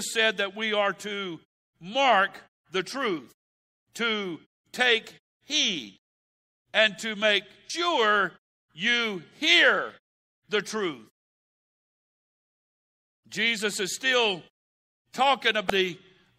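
At 7.70 s, just after "and to make", the speech is broken by a brief glitch caused by damaged data in the compressed stream: a corrupted stretch of bytes makes the decoder misread the frame, lose sync and hunt for the next valid header, so the sound blips. The same glitch recurs at 15.70 s. Both events last only a few milliseconds. The muted pauses, where the background drops to silence between phrases, are separate from these glitches.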